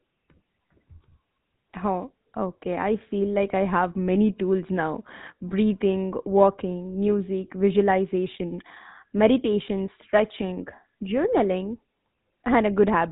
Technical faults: GSM full-rate codec

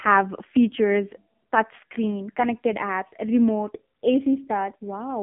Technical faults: AMR narrowband mobile codec

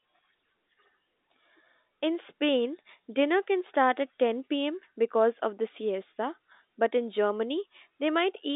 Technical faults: none

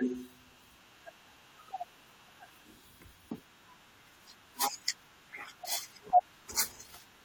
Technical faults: damaged data in a compressed stream

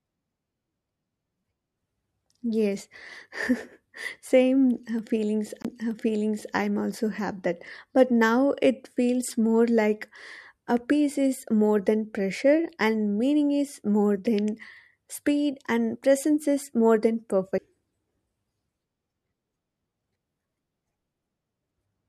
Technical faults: CD skip

